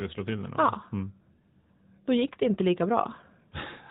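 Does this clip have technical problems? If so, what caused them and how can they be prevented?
Yes. The whole speech clip carries AMR narrowband mobile codec damage. Nothing above 4 kHz gets through, so the sound is dull and boxed in. The codec samples at 8 kHz and rebuilds speech from a vocal tract model fed by a few pulses per 5 ms subframe. The artefacts are plainly audible, with a synthetic edge. That degree of damage fits a higher AMR-NB mode near 10 kbps. To prevent it, record or transmit over a wideband path instead of a narrowband mobile codec.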